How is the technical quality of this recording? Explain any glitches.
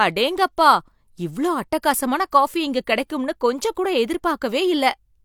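No technical faults are audible in this speech recording.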